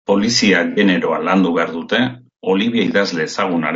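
From the start, the speech is rough and grainy, with noise filling the gaps between harmonics and a thin, synthetic top band. This is plainly audible low-delay AAC compression, likely AAC-ELD, whose short frames resolve pitch poorly, consistent with a bitrate around 32 kbps.

From 0.71 to 0.79 s, AAC frame loss with concealment produces a brief smeared, noisy, phasey patch. The decoder rebuilt the missing audio from the last good spectrum, which fits a couple of lost frames rather than a longer dropout.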